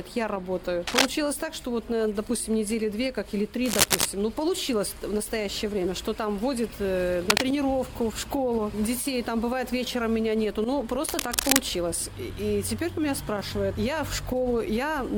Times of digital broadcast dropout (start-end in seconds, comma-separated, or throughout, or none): none